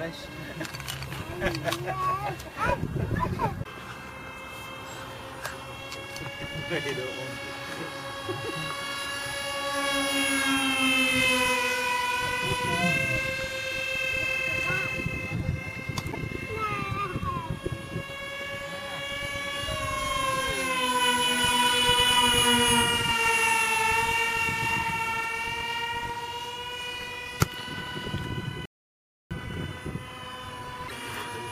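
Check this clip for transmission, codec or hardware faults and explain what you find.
One fault turns up, an audio dropout to silence from 28.66 s to 29.31 s. The input feed was likely lost for about 0.65 s, through a disconnected device, a broken link or a brief mute, while the recorder kept writing silence. The sound stops abruptly and returns just as abruptly, and the gap between is silent with no room tone or noise floor. Whatever occurred during those 0.65 s is missing entirely.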